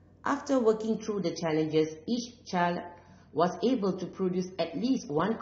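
At 0.96 s the speech switches abruptly to an adaptive stream at a lower bitrate and stays there to the end. Everything above about 6.3 kHz vanishes and the sound turns dull and swirly, which fits a step down from around 96 to 24 kbit/s AAC. Unlike a dropout, there is no gap.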